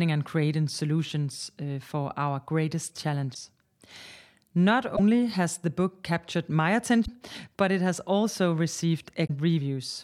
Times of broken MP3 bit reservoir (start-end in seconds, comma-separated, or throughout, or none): 3.33-3.36, 4.95-5.00, 7.04-7.09, 9.26-9.30